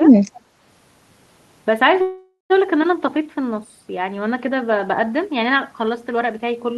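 Right at the start, from 0.00 to 0.12 s, the speech dips by something like 10 dB for around a tenth of a second. That's speech suppressed in double talk. The likely cause is that both ends were talking at once, so the echo canceller couldn't tell the local talker from the loudspeaker echo and pulled everything down together. You hear the opening sound shrink and thin out for that brief moment.

Then from 0.34 to 0.41 s there's a faint echo leak: a ghostly copy of the speech trailing by about 234 ms, sitting roughly 30 dB under the main signal. It's likely the far end is on a loudspeaker and its canceller let a scrap of what its microphone picked up slip back across. It's short and quiet.

The bigger event is a call audio freeze from 2.01 to 2.52 s. Packets were likely held up in transit and the jitter buffer ran dry, so the receiver stretched the last sound into a fading buzz, with about 140 ms of that stretch going fully silent. 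The fill lasts 485 ms in total. When the packets catch up, the audio resumes exactly where it stopped with nothing lost, but everything after that point now runs 485 ms later than before.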